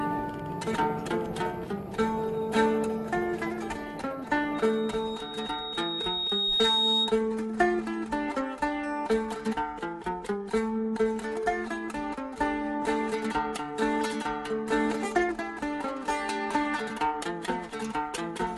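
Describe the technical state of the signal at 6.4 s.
At 6.4 s you're right in the middle of a loudspeaker feedback squeal, which runs from about 4.54 to 7.20 s. A microphone is hearing its own loudspeaker, and at 3.8 kHz the loop gain has gone past one, so that tone keeps feeding itself. It swells over roughly two seconds into a piercing whistle, and by 6.4 s it sits a few dB above the rest of the sound.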